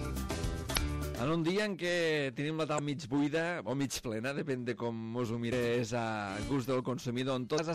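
Hard clipping runs throughout, with peaks driven about 11 dB past the limit and roughly 7% of samples flattened, giving harsh fuzz, squared-off waveform tops and harmonics smeared upward on the spectrogram. Damaged data in a compressed stream causes brief glitches at 0.73–0.77, 2.75–2.79, 5.51 and 7.55–7.60 s, where the decoder lost sync.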